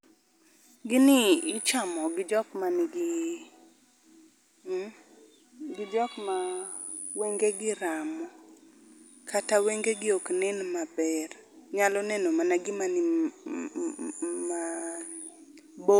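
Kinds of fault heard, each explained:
No technical faults can be heard in this speech.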